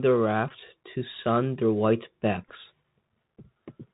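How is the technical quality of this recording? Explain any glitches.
The technical quality is poor: the whole recording passes through a narrowband Bluetooth link, and two brief glitches interrupt it.

The Bluetooth CVSD headset codec affects the full clip. Its one-bit slope coding caps the band near 4 kHz, and its lagging step size leaves granular hiss and scratchy s sounds. That scratchiness, rather than smooth dulling, sets it apart from a plain low-pass filter.

A Bluetooth headset packet was repeated at 0.49–0.51 s and again at 2.49–2.54 s. Lost packets were replaced by the previous packet's bits, giving a brief buzz near 267 Hz about 15 ms and 11 ms long, which fits three or four repeats. It is a steady tone rather than a silence gap or a click.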